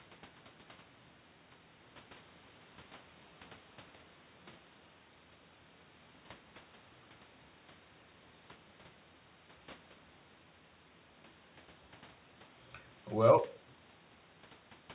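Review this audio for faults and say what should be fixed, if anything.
Nothing in this speech recording needs fixing. The call path can be heard in the narrow telephone-band sound with nothing above 4 kHz, which fits G.711 A-law at 64 kbps.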